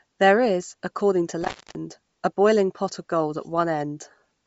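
Throughout the speech, the sound is band-limited, with nothing above 7.7 kHz, and carries a plainly audible breathy, grainy edge. The likely cause is Bluetooth LC3 compression at a low bitrate, which fits around 32 kbps with 10 ms frames, discarding upper spectrum and filling it with noise.

From 1.42 to 1.75 s, after "is according to" and before "a boiling pot of", an intermittent contact opens the line for 274 ms. The sound drops out with crackle at both edges, leaving only faint hiss until the connection returns.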